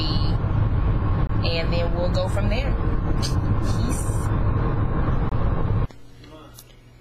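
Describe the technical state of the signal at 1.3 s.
At 1.3 s the signal sits just after a gap at a join of encoded pieces, running from 1.27 to 1.29 s, a silence of about 23 ms. Two separately encoded stretches were butted together untrimmed, so one encoder's start-up delay and the other's final-frame padding remain. It sounds like a brief dropout, with the sound resuming where it stopped, recurring every 4.0 s. On a waveform it shows as a near-flat strip; a spectrogram shows a thin vertical blank band with slightly softened edges.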